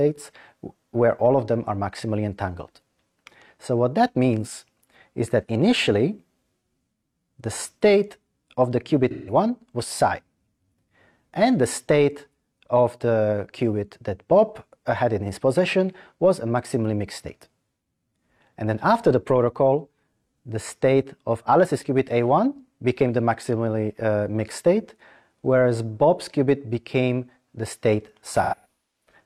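AAC frame loss with concealment smears the audio from 9.11 to 9.33 s, about 0.17 s (roughly four frames), and intermittently from 28.42 to 29.09 s, where gaps up to about 0.2 s leave blurred, noise-filled spectrogram patches and dips in the waveform envelope.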